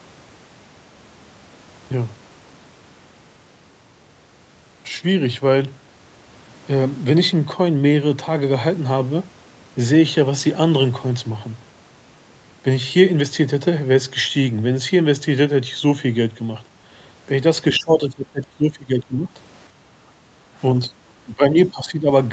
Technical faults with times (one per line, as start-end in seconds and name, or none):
17.78-19.30 speech suppressed in double talk
19.70-20.55 background gated by the echo canceller
20.88-20.92 speech suppressed in double talk
21.24-22.09 speech suppressed in double talk